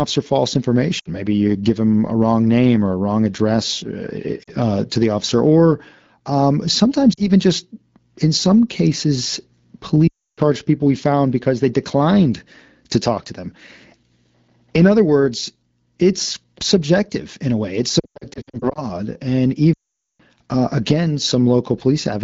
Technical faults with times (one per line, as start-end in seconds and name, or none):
0.99-1.09 lost AMR speech frames
4.43-4.51 lost AMR speech frames
7.13-7.28 lost AMR speech frames
10.08-10.40 lost AMR speech frames
18.00-18.84 lost AMR speech frames
19.73-20.21 lost AMR speech frames